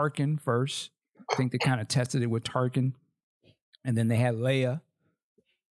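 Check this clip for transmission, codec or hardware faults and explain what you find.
Nothing worth flagging turns up here; the speech holds steady all the way along and there's nothing to point at.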